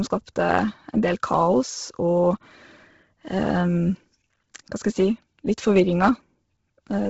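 Speech throughout with Bluetooth LC3 compression, likely from a heavily squeezed LE Audio link: nothing reaches above 7.7 kHz, and the top band sounds breathy and grainy from noise filling, not the clean dulling of a simple low-pass. The heavy damage fits a bitrate near 16 kbps.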